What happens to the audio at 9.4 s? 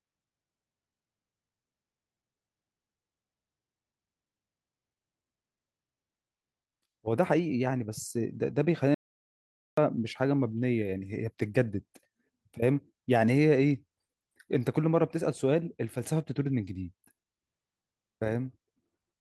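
An audio dropout to silence runs from 8.94 to 9.78 s: the speech cuts to silence with no room tone for 0.83 s, likely because the input was lost while silence kept being written.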